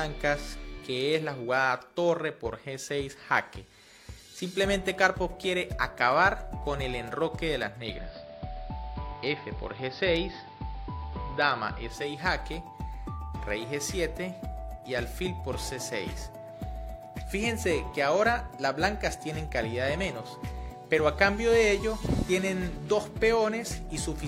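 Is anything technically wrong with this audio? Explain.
Yes. From 7.66 s to 12.22 s the audio shows digital radio blending to analogue: a hybrid receiver lost its digital stream and cross-faded, over about 0.38 s, to the AM broadcast of the same station, then faded back. The AM path narrows the treble and adds hiss roughly 30 dB below the signal, while the level stays the same. Unlike a plain filter or dropout, the change arrives as a smooth cross-fade and reverses just as smoothly.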